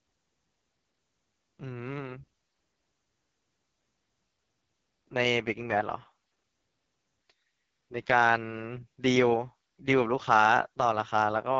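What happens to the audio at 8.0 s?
At 8.0 s the speech carries the damage of the AMR wideband (HD Voice) codec, which runs through the whole clip rather than starting there. The rough, raspy texture points to the lowest rate, which fits the 6.6 kbit/s mode: the pulse-driven vocal tract model has too few bits to reproduce the excitation faithfully, so voiced sounds turn coarse. The top band is synthetic noise, and nothing is present above about 7.7 kHz.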